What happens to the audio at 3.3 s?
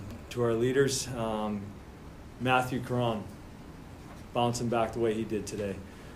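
Nothing goes wrong at 3.3 s; the audio carries on intact through that moment with no dropout, click or other fault.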